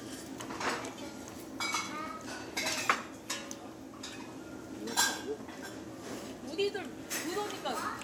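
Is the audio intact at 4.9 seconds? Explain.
Yes, at 4.9 s the audio is intact, with no dropout, click, distortion or other fault at that moment.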